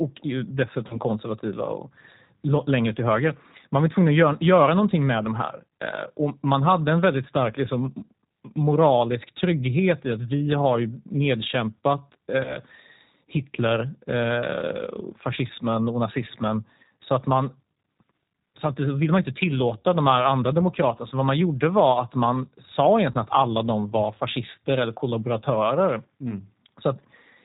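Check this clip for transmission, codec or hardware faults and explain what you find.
Two faults are present: the whole recording went through a G.729 speech codec, and three brief packet dropouts were patched over by the decoder.

G.729 codec, throughout: The speech was squeezed into a low-rate model of vocal tract shape, pitch and a few excitation pulses per frame, which fits 8 kbit/s G.729A. Everything above 4 kHz is gone, so the sound is dull and narrowband, and the coding damage is plainly audible as a rough, slightly synthetic texture.

VoIP packet loss concealed by the speech codec, at 0.88 to 1.0 s, 12.44 to 12.59 s and 23.12 to 23.17 s: Each gap points to a single 20 ms packet going missing. The decoder filled it by carrying forward its last pitch and filter settings with falling gain. Each spot becomes a short buzzy or smeared stretch, and because each frame builds on the previous one, the sound stays weakened past the lost 20 ms.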